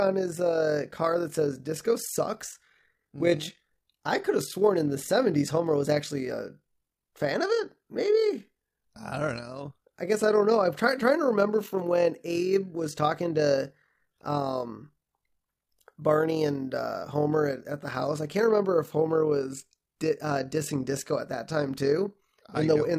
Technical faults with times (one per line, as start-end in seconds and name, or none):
0.00-22.98 overlap-add ripple